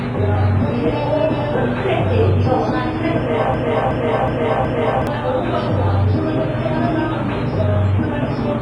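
From start to finish the sound carries WMA compression damage, and it is heavy. Nothing reaches above 10.5 kHz, and the top end rings and smears into a washy hiss that swells and fades with the signal. The long transform blocks spread quantisation noise over tens of milliseconds, and weak detail is dropped outright, which fits a low bitrate around 24 kbps. The likely cause is a coarse WMA encode. Unlike a plain low-pass filter, which would only dull the sound, this one also rings and breathes.

From 3.54 s to 5.07 s a broken-record loop takes over. A fragment of about 0.37 s plays four times back to back, identical each pass, and whatever should have sounded in that stretch never arrives. The likely cause is a stall in the player or stream, which kept resending the last piece it held. The exact repetition sets it apart from an echo or reverb tail, which would fade and blur with each return instead of recurring unchanged.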